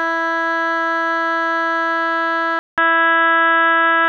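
At 2.59 s the music cuts out for 187 ms, then returns boxy and dull until the end, with nothing above 3.8 kHz, a level shift of about 5 dB and a new noise floor about 40 dB down. This is likely the input switched to a poorer device.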